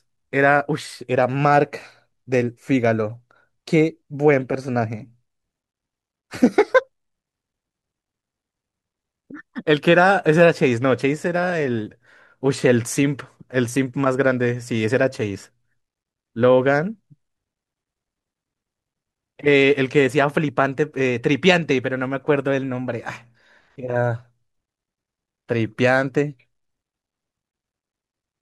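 No technical faults are audible.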